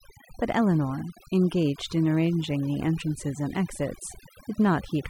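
Overdone noise removal runs through the whole recording. The noise reduction was set so aggressively that any frequency band close to its noise estimate gets pushed down or shut off, taking the quieter parts of the speech with it. Between phrases the background collapses to near silence dotted with twinkling specks. A spectrogram shows scattered isolated pixels in the gaps and ragged, hollowed-out harmonics.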